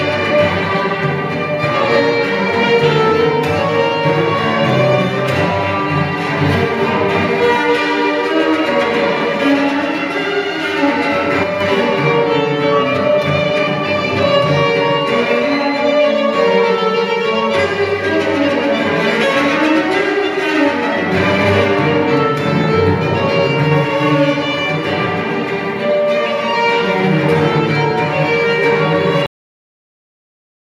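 At 11.44 s the level drops suddenly by about 5 dB and stays down until 11.61 s. The sound and the background noise fall together, with no ramp. This is a sudden gain jump, likely a digital gain change applied between one sample and the next.

At 29.26 s the audio stops in the middle of a sound and goes silent at once, with no decay. This is a cut-off end. The final buffers were never written or played, so the last part of the audio is simply missing.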